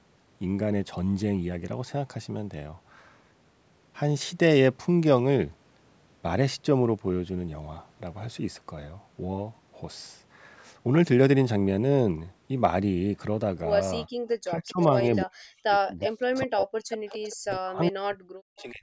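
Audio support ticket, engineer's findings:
Room background drops out abruptly at 14.09–14.16 s, about 33 dB down, then returns. Background gated by the echo canceller, clamping the mic hard while far-end audio played.

Speech dips and chops in pieces at 14.44–15.01 s (mild, around 15 dB), then 15.23–16.01, 16.18–16.88 and 17.32 s to end (deep, around 40 dB). Likely speech suppressed in double talk: canceller attenuating near-end talker alongside echo.

Faint delayed copy of speech, roughly 10–15 dB below it, at 16.05–16.10 s and 16.90–17.28 s, lagging by 393 ms. Likely echo leak: residual loudspeaker pickup escaping the canceller and returned. Band-limit at 8 kHz from the call mic path.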